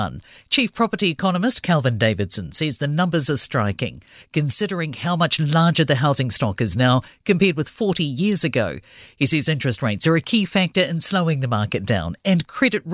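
Just speech here, and there's nothing technically amiss anywhere in it, so there are no times or causes to report.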